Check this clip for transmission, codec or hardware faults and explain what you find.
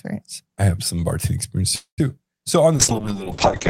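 Two transmission faults can be heard in the speech: a call audio freeze and, near the end, a call bitrate drop.

From 1.75 to 2.00 s, just after "have some bartending experience", the speech stalls for about 0.24 s. The last sound is carried on as a short fading buzz, then about 120 ms of silence follows before speech resumes exactly where it left off. The likely cause is late packets draining the jitter buffer. The receiver papers over the wait instead of dropping anything, so nothing is lost, but everything after is shifted about 224 ms later.

From 2.76 s to the end, the audio quality falls sharply. The coding rate drops from 32 kbps to 7 kbps, and the audio bandwidth narrows from 20 kHz to 8 kHz. The encoder, told to spend far fewer bits, quantises the spectrum coarsely and discards everything above 8 kHz. That gives the remaining speech a muffled, dull top end with a rough, watery texture, and it does not recover before the clip ends.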